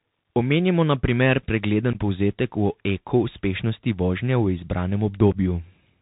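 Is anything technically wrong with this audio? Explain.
Yes, two things. The whole clip is speech carried over a Bluetooth CVSD headset codec, and the damage is plainly audible. Nothing gets through above 4 kHz, so it sounds boxed-in and phone-like. CVSD sends just one up-or-down bit per sample and adapts its step size, which fits a 64 kbps link. Loud, bright sounds outrun that step and distort, s sounds come out scratchy, and there's a grainy hiss sitting under the speech.

There's also unconcealed Bluetooth headset packet loss, twice. The first is between 1.93 and 1.97 s, right after "na primer pregleden" and before "povzetek o eko uspešnosti". The second is at 5.32 s. Each time about 15 ms of audio, likely a couple of packets between headset and phone, simply went missing and was replaced by silence or idle signal. You hear a brief hole with hard edges that can click, and the speech comes back quieter for a moment.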